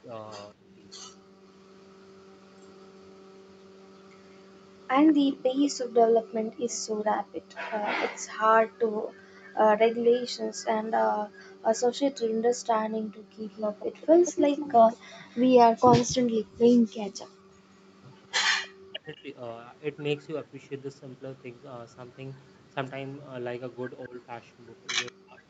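From 0.54 to 0.82 s the speech dips by about 5 dB for roughly a brief moment. This is speech suppressed in double talk. Likely, both ends spoke at once and the echo canceller turned its own talker down.

From 1.02 to 6.79 s an echo leak appears. A faint copy of the speech trails by 187 ms, about 40 dB below it. The far end's canceller likely missed part of its loudspeaker pickup.

From 1.16 to 1.44 s the room sound drops out by about 40 dB. This is background gated by the echo canceller. It clamped the microphone while the loudspeaker played. The same gating returns between 6.54 and 13.32 s, about a second in total, again near 40 dB deep.

From 13.51 to 25.12 s the echo leak is back, now much louder. The 187 ms copy sits only about 15 dB under the speech. It is likely the same leaking canceller. Inside it, from 16.47 to 17.49 s, the background gates again, by about 38 dB.

From 18.55 to 19.28 s the speech is cut hard, by about 40 dB. 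From 24.07 s to the end it happens again at the same depth. Both are likely further double-talk suppression.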